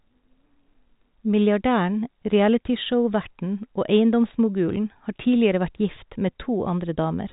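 Nothing stood out on listening to this speech, which comes through G.726 ADPCM at 40 kbit/s with nothing above 3.8 kHz.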